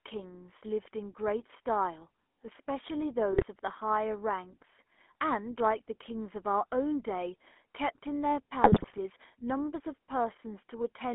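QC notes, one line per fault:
Throughout: GSM full-rate codec. The speech carries the plainly audible buzzy, gravelly roughness of the first GSM codec, which rebuilds the voice from a vocal-tract filter excited by a sparse, regularly spaced pulse train instead of the real waveform. The sound is also confined to a telephone band of roughly 250 Hz to 3.4 kHz, so it is thin, with no low body and no air, and it fits a 13 kbps full-rate stream.
3.32 to 3.44 s, and 8.62 to 8.99 s: GSM bit errors. Two bursts of corrupted decoding break the speech into squawks, pops and gargling. The errors are landing in the coded filter, pitch and gain values, so for each damaged frame the decoder builds a wrongly shaped spectrum or throws out a sudden jump in level. The first burst lasts about a tenth of a second. The second runs close to 0.4 s and is the longer, more sustained disruption.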